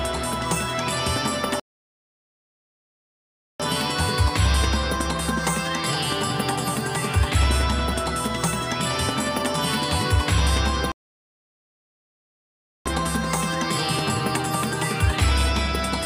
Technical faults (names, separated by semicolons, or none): playback stall